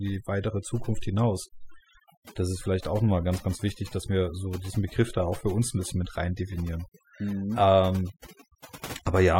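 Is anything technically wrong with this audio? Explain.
Yes. Throughout the speech there's overdone noise removal: the denoiser was pushed too hard, so any frequency band sitting near its noise estimate gets slammed down, quiet bits of the voice included. You get a near-silent background with twinkly specks.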